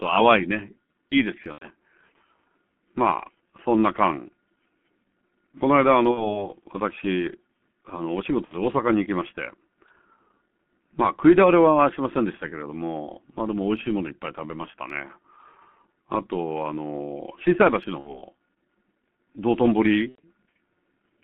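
Speech that sounds muffled and hoarse throughout, with smeared consonants and nothing above 3.4 kHz or below about 150 Hz. This is heavy G.723.1 codec damage: its 30 ms frames and slow-updating voice model fit a stream of roughly 6.3 kbit/s. At 1.52–1.68 s, 6.11–6.47 s, 8.45–8.57 s, 17.99–18.23 s and 20.09–20.20 s the sound stretches into a buzzy tone or coloured noise that fades, and stays weak for a moment afterwards. This is VoIP packet loss concealed by the speech codec. The decoder fills each gap, which fits two or three lost 30 ms frames, by extrapolating its last pitch and filter with falling gain.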